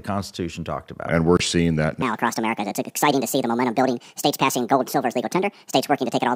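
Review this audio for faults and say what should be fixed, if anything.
At 1.37 s the audio drops abruptly into silence for about 42 ms, ending at 1.41 s with timing intact. This is a corrupt frame muted: the decoder rejected damaged compressed data and substituted silence, and the gap's length fits two frames. Adding error protection or checksums with retransmission on the delivery path would prevent it.

From 2.02 s to the end, everything runs hurried and shrill, 1.68 times too fast and raised by about ten semitones, with speed and pitch jumping together. This section at the wrong speed is likely from playback or editing against a mismatched clock or sample rate. Matching clock and sample-rate settings across every editing and playback stage would prevent it.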